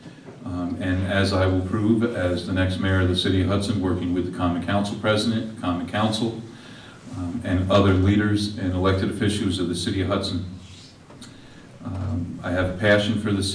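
Nothing in this audio calls for a technical fix.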